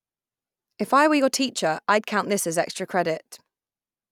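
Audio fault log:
No faults heard.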